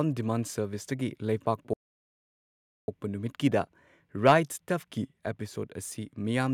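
At 1.73 s the speech just drops out, and nothing comes through until 2.88 s, a gap of about 1.15 s before it picks back up. That's a playback stall, likely the player running dry or its thread getting blocked, so the output sat silent until it caught up.

Then from 4.29 to 4.33 s there's a brief harsh, crackly edge on a loud peak. That's microphone overload: the input likely went about 3 dB past the converter's ceiling, flattening the tops of a small share of the waveform, around one sample in twenty.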